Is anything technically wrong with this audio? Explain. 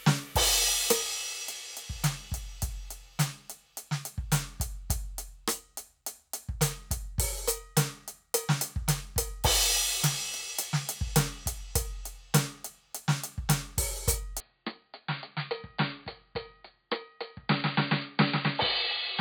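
Yes. From 14.40 s to the end at 19.20 s, the music abruptly turns dull and a little quieter, with faint new background noise underneath and no gap at the change. The input was likely switched to a poorer device whose narrower band cuts everything above 4.7 kHz. On a spectrogram the upper content ends sharply at 4.7 kHz from 14.40 s onward, and the waveform drops by roughly 5 dB.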